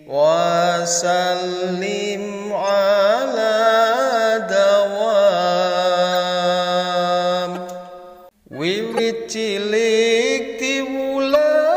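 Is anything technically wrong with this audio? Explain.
Yes. Corrupt frames were decoded at 2.68–2.72 s, 6.12–6.16 s, 7.55–7.57 s, 8.92–8.99 s and 11.28–11.36 s. In each, damaged bits in a few compressed frames, up to about five in the last event, were played rather than concealed, so misread gains or codes put energy in the wrong frequency regions for a few tens of milliseconds. Each is a brief chirp, blip or burst of noise, or a short gap. The error is loudest at 8.92 s and quietest at 2.68 s.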